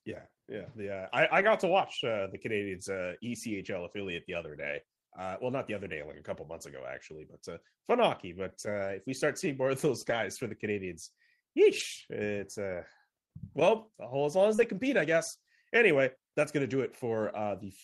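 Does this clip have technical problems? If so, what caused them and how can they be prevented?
Yes. There's a lost packet rebuilt from error correction at 1.37–1.43 s, right after "yeah yeah I", then at 3.63–3.65 s, at 10.01–10.15 s between "seeing more of those" and "for the", at 11.79–11.81 s, and at 14.58–14.64 s. Each spot sounds rougher and a bit noisy but never drops out. Packets went missing, and the decoder played the low-bitrate backup copies carried in the following packets. The lengths point to about one to four 20 ms packets per hole. Keeping jitter and loss down on the network path, for example with a wired link or QoS, prevents this.

There's also a short concealed packet loss at 14.55–14.60 s, after "well as long as" and before "compete I guess". It's a brief smear where about 40 ms never arrived in time. The receiver stretched the preceding sound across roughly 30 ms and then blended back into the real audio. 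A larger jitter buffer and a steadier connection prevent this.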